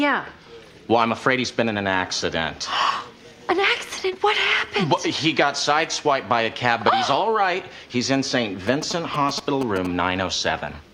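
From 8.67 to 9.87 s, galloping ticks and short 217 Hz buzzes intrude: GSM signalling bursts from a nearby phone, rectified by the audio circuitry.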